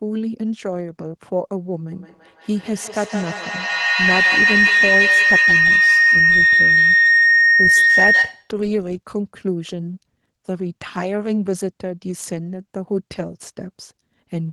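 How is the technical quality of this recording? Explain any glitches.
The quality is seriously compromised by one fault occupying a large part of the speech.

Feedback howl runs from 1.92 s to 8.63 s. Two devices in the same room appear to be joined to one call, so sound from one loudspeaker re-enters the other microphone and circulates, gaining level on each pass. The repeats narrow into a shrill tone around 2 kHz, with a loop round-trip delay of roughly 150 ms, and the howl peaks about 7 dB above the speech before the loop is broken.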